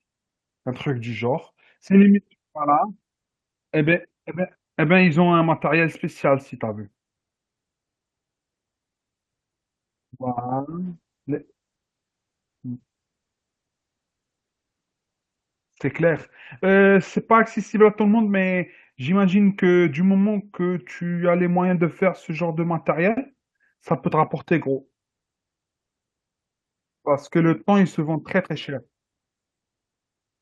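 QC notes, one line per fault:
10.35 to 19.25 s, call bitrate drop: the speech turns rough and watery, and the top end is cut from 12 kHz to 8 kHz, so it sounds muffled. It is at its worst for about 5.6 s before recovering, which fits the encoder dropping from 32 to 10 kbps. Unlike packet loss, there are no gaps or dropouts. Unlike a fixed filter, the dulling starts and ends with the coding roughness.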